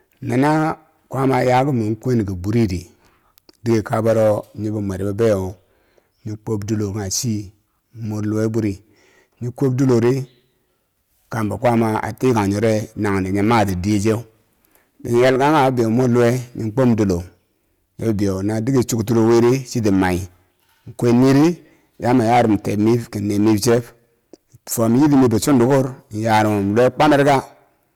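Hard clipping runs through the whole speech recording. The level is driven about 13 dB too hot, so a few percent of peaks flatten into harsh crackly fuzz.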